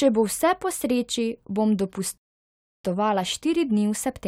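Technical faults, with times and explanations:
2.18–2.84 s, playback stall: right after "vse po sreči bom" the speech cuts to silence for about 0.67 s, then resumes with "štiri dni". The likely cause is the player running short of buffered data or its thread being blocked, so output halts until it catches up.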